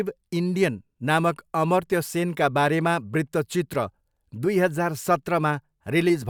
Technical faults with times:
none

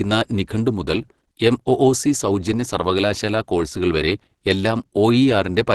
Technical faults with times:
0.00-5.74 Opus compression

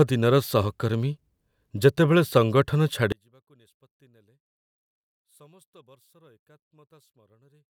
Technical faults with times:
3.12-7.70 one channel inverted

